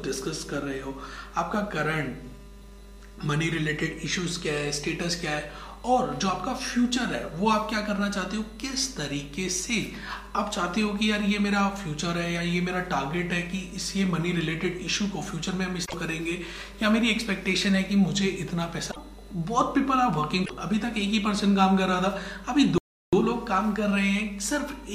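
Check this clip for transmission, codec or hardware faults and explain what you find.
Two kinds of fault are audible: three short bursts of damaged data in a compressed stream, then one playback stall near the end.

Damaged data in a compressed stream at 15.84–15.94 s, 18.88–18.97 s and 20.42–20.51 s: corrupted frames throw the decoder out of sync, producing brief glitches about 0.1 s long.

Playback stall at 22.78–23.13 s: the sound cuts out for about 0.35 s, likely because the player ran short of data, then resumes.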